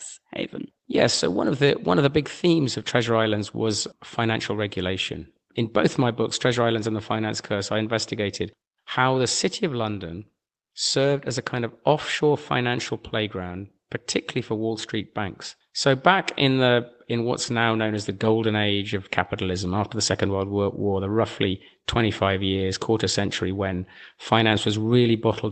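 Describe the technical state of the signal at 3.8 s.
At 3.8 s the speech is intact, with no fault, just the normal sound of an Opus call path whose bandwidth stops at about 8 kHz.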